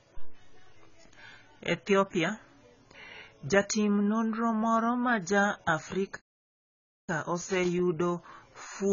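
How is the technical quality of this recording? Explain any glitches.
The technical quality is poor, with dull, band-limited speech throughout and three audible glitches.

AAC compression: Nothing is audible above 7.1 kHz, and the sound is smeared and warbly, likely from AAC-LC coding at a very low bitrate, around 16 kbps.

Loose connector crackle: From 0.72 to 0.80 s and again from 7.41 to 7.79 s, irregular scratchy bursts cut in as an intermittent contact breaks and remakes the signal.

Playback stall: From 6.17 to 7.09 s the audio drops to silence for about 0.92 s mid-flow. The likely cause is a player starved of data.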